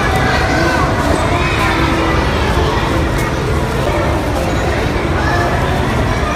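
At 3.86 s a CD skip jumps the laser to another track turn: a brief mute and tick, seen as a sharp waveform break and vertical spectrogram line.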